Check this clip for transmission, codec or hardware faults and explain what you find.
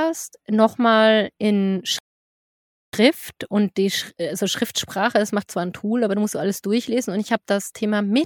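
There's one fault here, a playback stall. From 1.99 to 2.93 s the speech just stops dead for about 0.94 s, then carries on. The likely cause is the player running dry on data or its thread getting blocked, so output sat silent until it caught up.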